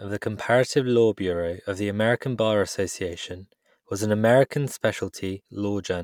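No audible technical faults turn up anywhere in the recording.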